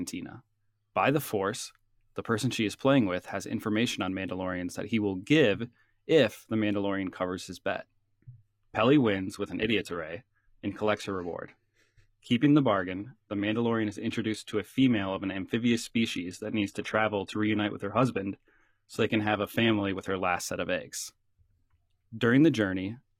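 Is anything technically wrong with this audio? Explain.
Yes: from 8.23 to 20.23 s, between "covers his bet" and "set of eggs", an adaptive stream at a lower bitrate switches abruptly, without a gap, to thinner, synthetic-sounding treble, consistent with roughly 20 kbit/s HE-AAC. Nothing above 14.9 kHz remains.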